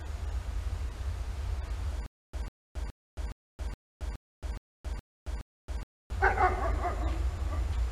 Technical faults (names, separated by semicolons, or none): stutter with silent gaps